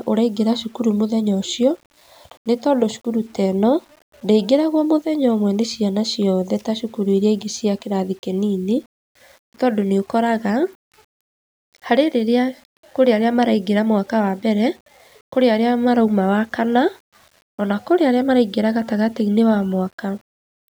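Throughout, the speech was likely rounded to low bit depth without dither, consistent with 8 bits, leaving grainy distortion about 40 dB down that tracks the signal and roughens quiet passages.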